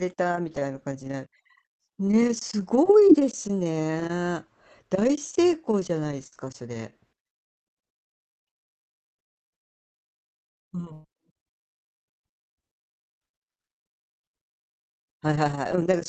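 From 6.27 to 9.39 s the speech breaks up with repeated packet loss, giving a robotic sound. Nine short holes appear, the longest 110 ms. Each is patched by stretching the previous sound. The result is choppy, with fragments missing.

Overlapping this, from 6.45 to 11.08 s, a jitter buffer slow-down stretches the audio. The receiver repeats small pieces to rebuild its reserve. This adds about 105 ms, so delivery runs at 98 percent speed. Pitch stays the same, but sounds drag slightly.

At 9.61 s the sound cuts out for about 0.35 s. The last sound trails off briefly, then near-silence follows. Speech resumes at 9.96 s with that stretch gone. This gap is likely a long network dropout.

From 10.49 to 11.07 s the robotic packet loss returns, harder this time. Three gaps occur, the longest 115 ms, and concealment covers almost half the span. The speech sounds heavily chopped here.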